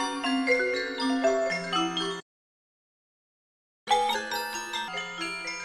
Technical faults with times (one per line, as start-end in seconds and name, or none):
2.20-3.88 playback stall
3.88-4.88 catch-up at higher speed